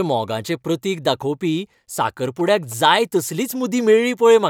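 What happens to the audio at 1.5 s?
Nothing goes wrong at 1.5 s; the speech carries on intact through that moment, with no dropout, click or other fault.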